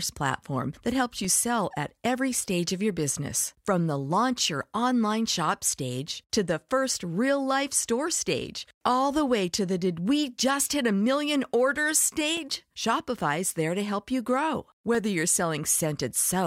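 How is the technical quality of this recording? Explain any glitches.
The speech has four brief glitches, each a block of digital silence: at 1.25 s, at 12.37 s just after "million orders", at 13.50 s just before "there to help you", and at 14.95 s just after "to help you grow". The first three last 2.9 ms, which fits a 128-sample buffer going unfilled. The last lasts 0.66 ms. The signal drops abruptly to silence and returns with no fade, so each is heard as a sharp tick rather than an audible gap or a softened dropout.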